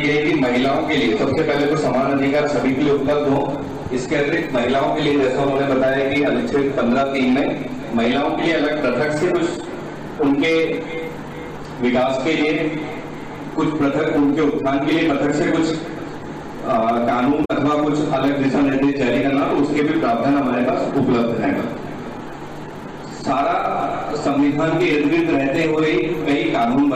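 At 17.41 to 17.51 s, damaged data in the compressed stream makes the decoder misread its frames and lose sync while hunting for the next frame header, giving a brief glitch.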